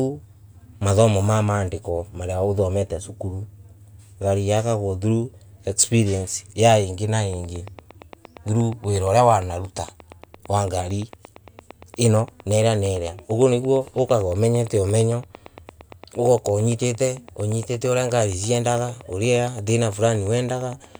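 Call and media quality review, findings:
Train of clicks, 7.33 s to 20.96 s. Likely cause: interference pulses from nearby equipment or a faulty connection or power supply, injecting a near-identical pulse at a steady rate. Effect: regular ticking at 8.7 clicks per second, about a hundred in all, peaking at roughly the level of the speech and heard through the pauses as well.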